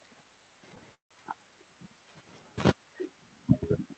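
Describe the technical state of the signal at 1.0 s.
A call audio freeze runs from 0.94 to 1.13 s, likely from packets stalling and draining the jitter buffer. The last sound is stretched into a brief fading buzz, then about 140 ms of silence, before speech resumes intact and 162 ms late.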